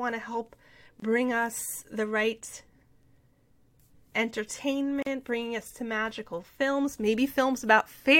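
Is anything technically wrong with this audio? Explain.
Yes. The speech has a gap at a join of encoded pieces, twice. At 1.00 s, right after "to help", the sound drops out for 24 ms and resumes with "bring us the right". At 5.02 s a 40 ms silence opens just before "bringing us to magical". The joins fall 4 s apart. Each piece kept its encoder's start-up delay and padded final frame when spliced. The dropouts have smeared edges, and the speech continues where it stopped.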